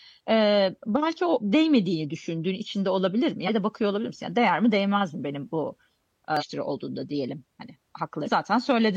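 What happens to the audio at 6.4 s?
At that point the compressed speech stream carries damaged data: a stretch of the encoded bytes is corrupted, so the decoder cannot read the frames there correctly, loses its place in the stream and has to hunt for the next valid frame header before decoding can resume. From 6.37 to 6.43 s, about 60 ms, the speech is broken by a short, garbled chirp or blip where the misread frames come out as noise instead of sound.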